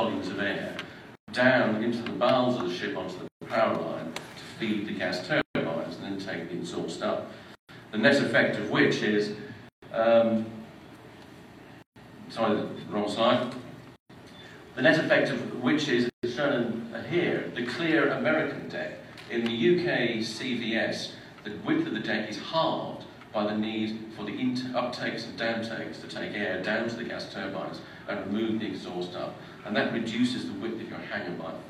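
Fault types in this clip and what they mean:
Gap at a join of encoded pieces: the audio was encoded in separate pieces of roughly 2 s and joined without trimming each piece's encoder start-up delay or the padding on its last frame, so that silence stays in at every seam. Eight times, from 1.15 s to 16.1 s, the sound drops out for about 125 to 136 ms, its edges smeared by the codec, and then resumes where it stopped.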